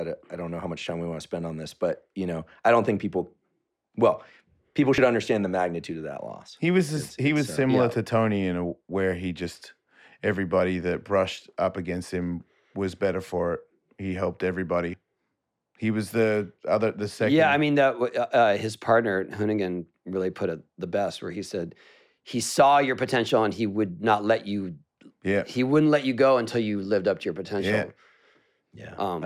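At 4.98 s and again at 14.94 s the speech jumps forward, losing about 40 ms each time, with the two sides butted together and no silent gap. The even 10 s spacing is what marks this as likely audio missing between chunks, with a short stretch dropped whenever the recorder closed one 10 s block and opened the next. A network dropout would instead leave a gap or a smeared patch at irregular moments.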